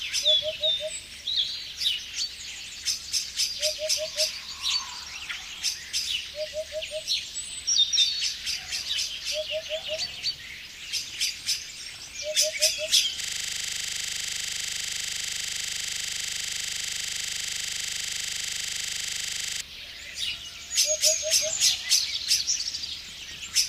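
A 25 Hz buzz fills 13.21 to 19.61 s: a system hang loop, one 40 ms slice replayed as the frozen driver's hardware kept cycling.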